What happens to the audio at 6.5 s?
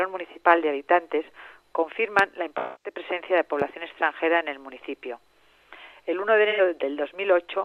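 AAC frame loss with concealment at 6.49 to 6.61 s: the decoder patches the 85 ms gap, about two frames' worth, from the last good spectrum, leaving a brief smeared, noisy patch.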